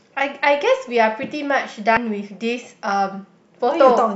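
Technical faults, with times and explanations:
1.97 s, damaged data in a compressed stream: a brief glitch in the speech where corrupted bytes made the decoder misread a frame and resync at the next header.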